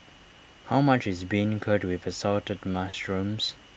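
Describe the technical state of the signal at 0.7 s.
At 0.7 s the signal is intact, with the speech passing cleanly through the call path and no dropout, glitch or distortion at that point.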